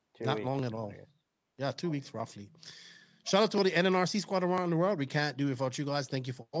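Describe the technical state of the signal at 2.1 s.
At 2.1 s the speech carries periodic USB or driver dropouts. They run from 0.09 s to 6.07 s, recurring every 0.5 s. Each time, something blocks the audio path briefly. Roughly a millisecond of signal is skipped, not filled. The two sides of the gap butt together. That splice is heard as a small tick. The ticks come at a steady rate and only sound while speech is present.

The same moment also holds an echo leak, from 1.82 s to 2.11 s. A faint copy of earlier speech sits under the current talk. It trails the original by about 1.07 s. It is roughly 25 dB below the main level, so it is quiet. The likely cause is a far end playing the call on a loudspeaker. Its echo canceller missed part of what its microphone picked up.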